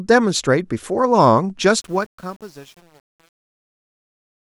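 A speech recording whose fade-out turns gritty from 1.80 s and stays rough to the end at 4.51 s. From about 2 s, as the level drops, the tail grows grittier instead of thinning cleanly. This is truncation distortion on a fade: the gain stage rounds each sample to too few levels without dither, which fits an 8-bit path. Near the bottom of the fade the waveform collapses into a handful of square steps.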